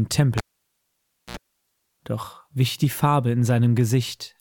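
Cable pulled and plugged in, 0.38–1.37 s: pop, near silence, 69 ms of 60 Hz mains buzz, another pop; a dropout lacks the buzz.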